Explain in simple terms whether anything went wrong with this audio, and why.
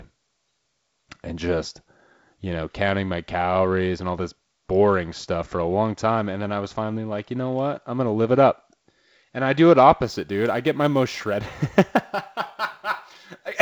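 From about 10.04 s to the end at 13.62 s, a faint hiss or roughness clings to the speech. It is strongest on loud and sharp, high-pitched sounds and drops away in the pauses. This is sample clock jitter: the clock that sets when each sample is captured wobbled by a few microseconds. Samples landed slightly early or late, and the error is largest where the sound changes fastest. The wideband telephone coding's quiet upper-band hiss is a separate effect.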